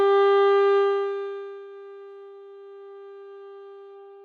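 Nothing technically wrong can be heard in this recording of sounds. Where the level rises or falls, it moves gradually, as a fader would.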